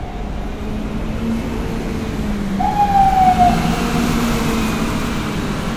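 Generation loss throughout these sounds: a swirly, hollow smear with blurred attacks, likely from repeated lossy passes, around seven, in a chain that fits 96 kbit/s MP3.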